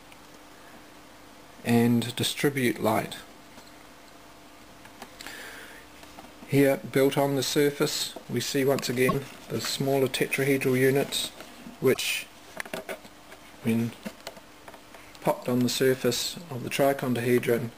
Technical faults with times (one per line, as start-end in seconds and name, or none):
9.08-9.15 broken MP3 bit reservoir
11.93-11.98 broken MP3 bit reservoir